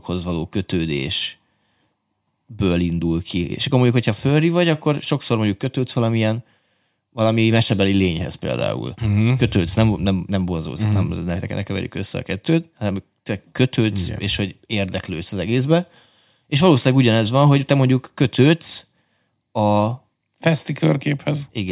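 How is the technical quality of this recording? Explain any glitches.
The recording is technically sound, with no glitches anywhere in the signal.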